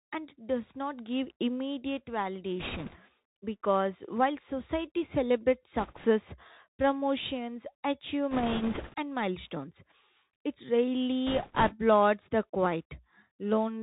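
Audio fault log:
Throughout: Bluetooth CVSD headset codec. The speech is band-limited, with nothing above 4 kHz. The one-bit delta coder's step cannot keep up with loud, bright sounds. S sounds turn scratchy, and a granular hiss sits underneath. This fits a 64 kbps headset link.
2.60–2.97 s, 5.79–6.05 s, 8.31–8.94 s, 11.27–11.75 s: bit errors on a Bluetooth voice link. Flipped bits add a rushing crackle without sharp clicks, because each bit carries little weight and errors fade. The first burst comes after "does not give immediate" and ends before "because while society celebrates". The second follows that phrase. Error rates run about 3, 2, 5 and 3 percent, so the 8.31 s burst is roughest.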